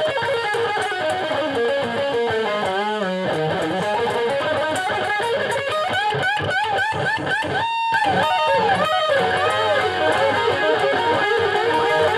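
A doubled audio track appears at 7.94 s and runs to the end of the clip. From that point a second copy of the sound plays roughly 0.7 s behind the first, at about the same level, so everything is heard twice in a distinct, clean repeat with no decay or room colour. The copy cuts in abruptly rather than fading up. The likely cause is the same signal being captured again through a slower path and mixed back in.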